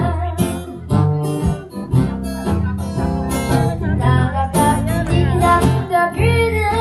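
No technical faults are audible.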